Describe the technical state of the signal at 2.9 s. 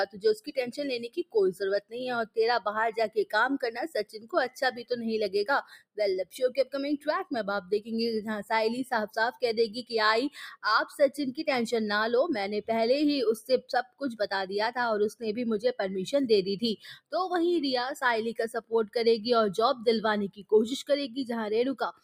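A speech-tuned noise suppressor is running on this material and treating held, steady content as noise, so its gain swings by around 10 dB throughout. Sustained parts and tails get pulled down while attacks pass, giving a pumping, fluttering, thinned-out quality.

At 2.9 s the sound is being cut by the noise suppressor, within a stretch from 0.06 to 3.33 s. It judged this passage to be noise and attenuated it harder than the rest, by as much as about 20 dB, so steady and decaying material sinks and fades early.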